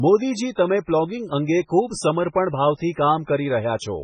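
MP3 compression damage runs through the whole speech clip, pointing to a very low bitrate near 16 kbps. Nothing sounds above 9.9 kHz, where the treble is cut off, and starved frequency lines flicker between frames, giving heavy watery swirl and smeared attacks, likely from that encoding.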